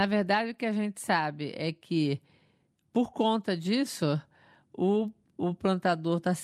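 Nothing stood out as a technical fault on listening to the speech in this recording.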